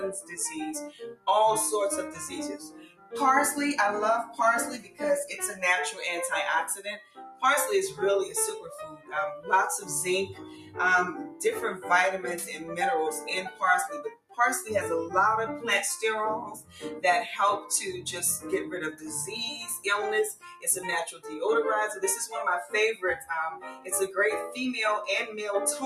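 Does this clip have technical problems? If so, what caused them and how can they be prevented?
Yes. Throughout, the level pumps and held sounds thin out, swinging by around 10 dB, because a noise suppressor built for speech was applied to music or sounds and mistakes steady tones and tails for noise. To prevent it, bypass speech noise suppression for non-speech material.

Sharper dips occur where sound was cut by the noise suppressor: 0.2–1.27 s and 2.58–3.14 s (about 17 dB), 4.26–7.42 s (about 15 dB), 8.62–14.38 s (about 19 dB), 16.55–17.7 s (about 13 dB), 20.35–21.3 s (about 16 dB), and 22.65–25.86 s (about 12 dB). Sustained and decaying sound sinks or is cut short while attacks survive. To prevent it, disable the suppressor or use a music mode that leaves steady content alone.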